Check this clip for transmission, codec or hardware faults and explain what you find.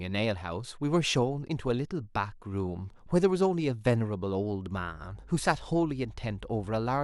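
One hardware fault is present. From 4.75 s to the end there is mains hum: a ground loop or nearby transformer leaks 50 Hz power into the speech at roughly 20 dB below it. It is heard as a steady tone at one fixed pitch with low harmonics, unlike broadband rumble.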